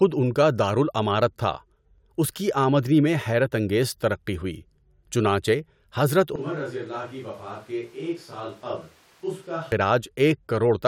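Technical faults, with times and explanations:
6.36–9.72 s, switch to a distant microphone: after "ترقی ہوئی چنانچہ حضرت" the close microphone likely dropped out, so speech turns abruptly roomy, thin, about 10 dB quieter and noisier.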